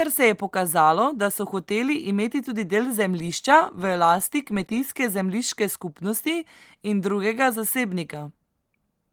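No faults found in this speech recording; the Opus voice coding at 24 kbps in hybrid fullband mode leaves only light coding damage, with the band reaching about 20.3 kHz.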